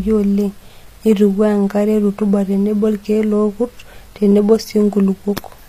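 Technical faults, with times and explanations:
Throughout, HE-AAC compression, likely: the treble sounds pasted on rather than real, with s sounds going gritty and lispy, which fits a low bitrate around 24 kbps. Upper bands look rebuilt from copied lower ones, so harmonics misalign, and nothing reaches past about 14.9 kHz.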